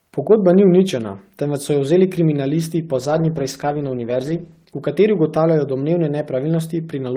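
At 3.0 s there's a call bitrate drop: the encoder gets squeezed from 32 down to 13 kbps and sits at the bottom for about 1.7 s. The speech turns coarse and muffled, losing its top end, then recovers around 4.81 s.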